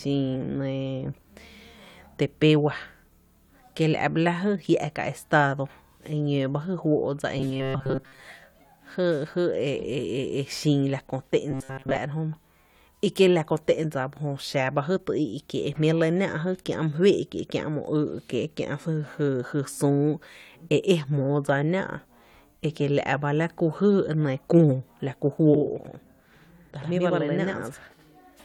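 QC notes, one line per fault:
7.38–8.23 s and 11.51–11.99 s, robotic sound from repeated short buffers: the speech collapses into a rigid metallic buzz at 133 Hz that still loosely tracks the syllables. This is likely caused by audio arriving too slowly, with a segment of about 7.5 ms looped to fill the gaps while most of the real signal is skipped.
25.54–28.44 s, channel delay (doubling): from just after "la ku" to the end, the speech is heard twice at equal level, as a slap echo 85 ms behind. One channel is late by a buffer, which fits 4096 samples at 48 kHz, and the two channels are summed to mono.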